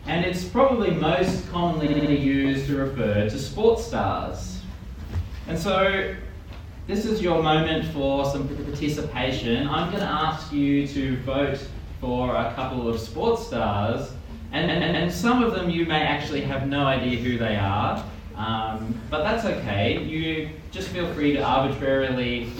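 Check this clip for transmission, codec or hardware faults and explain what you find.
Repeated frames occur three times: a short run of compressed frames was decoded again, so the same fragment replays as a stutter. At 1.86 to 2.11 s, a 64 ms block plays four extra times, fitting a three-frame run. At 8.54 to 8.72 s, an 85 ms block repeats twice more. At 14.68 to 15.06 s, a 128 ms block plays three extra times. Each repeat lengthens the audio by that time.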